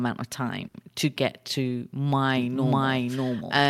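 At 0.67 to 0.76 s a sound is held about 70 ms too long with a slight buzz, then resumes unbroken: a short stall from a late packet, the jitter buffer stretching audio. From 2.37 s to the end, a second full-band copy of the speech runs roughly 0.7 s behind at about equal level, with no decay: a doubled audio track, likely a slower second capture path.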